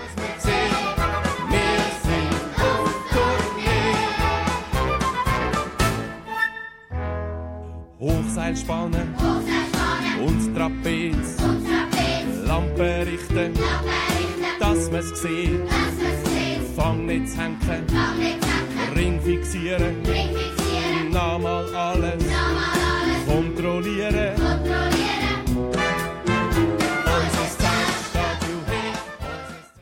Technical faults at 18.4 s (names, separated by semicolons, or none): none